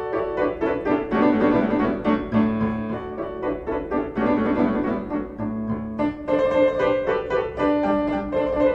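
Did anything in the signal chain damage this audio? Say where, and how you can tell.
Yes. A doubled audio track runs throughout. A full-band copy trails the sound by roughly 300 ms, about 5 dB down, with no decay or room colour. It likely comes from a slower second capture path or a misaligned copy mixed in during editing.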